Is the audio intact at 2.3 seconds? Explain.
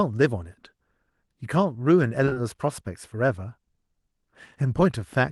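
No. Short concealed packet loss hits three packets in a row, at 2.25–2.29, 2.29–2.33 and 2.33–2.38 s, each gap fitting a 20 ms packet. The receiver stretched the preceding sound across the holes, so this stretch smears and wobbles briefly.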